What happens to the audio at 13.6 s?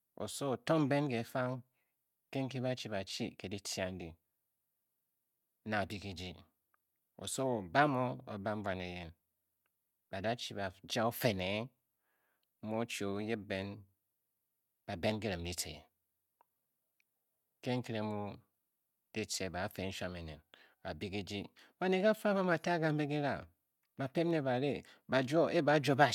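Nothing goes wrong at 13.6 s: the speech continues intact through that moment, with no dropout, click, distortion or other audible fault.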